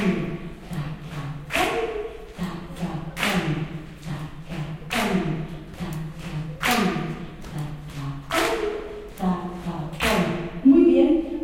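No technical faults are audible anywhere in this recording.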